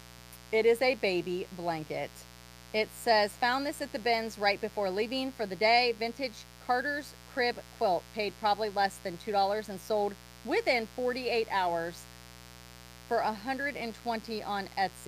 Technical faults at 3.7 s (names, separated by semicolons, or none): mains buzz